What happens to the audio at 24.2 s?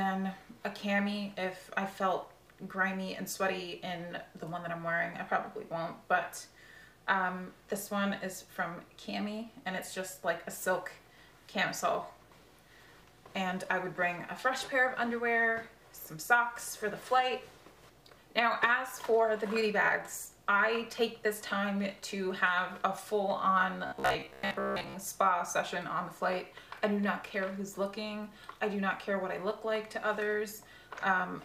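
New audio was likely arriving too seldom, so a roughly 15 ms buffer kept repeating from 23.86 to 24.94 s, forcing robotic sound from repeated short buffers: a rigid 66.7 Hz buzz replacing most of the audio.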